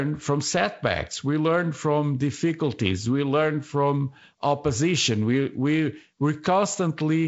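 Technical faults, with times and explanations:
Nothing stood out on listening to this speech, which carries the upper limit near 7.7 kHz and the light hiss expected of G.722 wideband telephone coding at 48 kbit/s.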